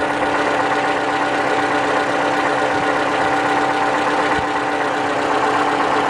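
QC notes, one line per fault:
Nothing to flag here; I listened all the way and didn't hear anything that needed noting.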